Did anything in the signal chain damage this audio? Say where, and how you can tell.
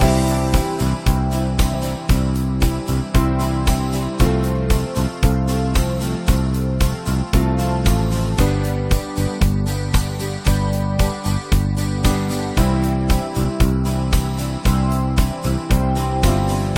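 Yes. The damage happened at the codec stage: damaged data in a compressed stream. Brief blips appear at 1.73, 4.26, 9.39 and 13.43 s, each shorter than 20 ms. At those points the decoder met corrupted frames, misread or refused them, then lost sync and hunted for the next valid frame header. A buffer underrun would instead leave a silent gap or a plain click, not a decoder losing and regaining frame sync.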